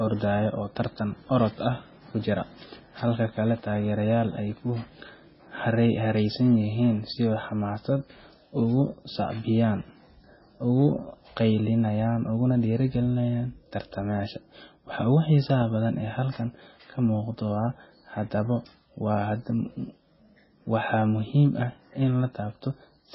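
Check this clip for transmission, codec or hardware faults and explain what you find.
One codec fault runs through the whole speech clip. Throughout, the sound is watery and swirly, with nothing above 5.5 kHz. This is likely MP3 compression at a very low bitrate, around 16 kbps, dropping weak frequency lines frame by frame.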